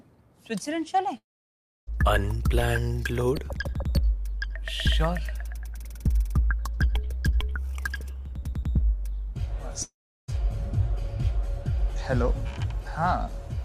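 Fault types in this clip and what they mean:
Long network dropout: at 1.17 s and 9.83 s the sound collapses into a short fading buzz or hiss, then silence lasting about 0.65 s and 0.36 s. It resumes at 1.89 s and 10.30 s with material skipped. This is likely a stalled connection, far longer than a click-like packet-loss glitch.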